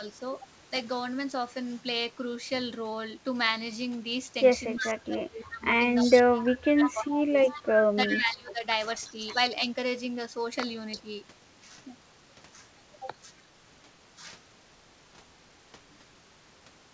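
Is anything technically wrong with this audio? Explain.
Yes, there are two related faults: echo leak and speech suppressed during double talk.

Echo leak appears at 4.77–4.90 s, 6.02–6.93 s, 7.48–8.19 s, 9.07–9.35 s and 10.91–11.02 s. A delayed copy of the speech trails the original by a fixed 341 ms. It sits about 10 dB below the speech in the first three stretches, then fades to about 30 dB and about 20 dB down. The likely cause is a far-end loudspeaker whose echo canceller let some of its own pickup return. Reverberation would give a smooth decaying tail, but here the copy is distinct and lands at the same delay every time.

Speech suppressed in double talk runs from 4.81 to 8.63 s and overlaps those echo bursts. For roughly 3 s in total the talker's level sinks, at its deepest by around 15 dB, and comes back in pieces. This is likely the echo canceller turning everything down because it couldn't separate the near voice from the returning echo. 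Packet-loss dropouts fall at random, but these dips follow the overlapping talk and leave the sound attenuated rather than cut to silence.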